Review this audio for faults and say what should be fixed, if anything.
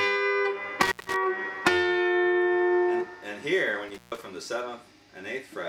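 Intermittent contact occurs at 0.82–1.16 s and 3.88–4.22 s, where a loose cable or plug briefly opens and the sound drops out for about 153 ms and 140 ms, with crackle at each edge. The waveform collapses to near-flat between spiky transients, and the spectrogram shows vertical broadband clicks bracketing an empty gap. Reseat or replace the suspect cable and connectors, and secure them with strain relief before recording.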